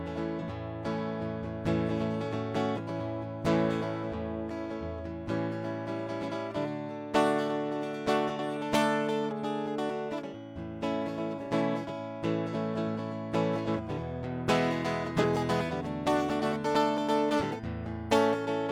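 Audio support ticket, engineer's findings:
Compressed frames skipped, music: jumps forward about 50 ms at 0.38–0.43, 12.50–12.55, 15.19–15.24 s. Missing or decoder-rejected frames.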